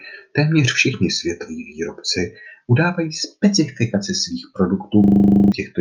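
At 5.04 s the speech gives way to a rough, rattling buzz at 25 Hz that lasts until 5.52 s, a single 40 ms fragment repeating twelve times. This is a system hang loop: the computer or audio driver stalled while the sound hardware kept replaying the same stretch of its ring buffer, which points to a buffer of about 40 ms. When playback resumes, roughly half a second of the speech is missing.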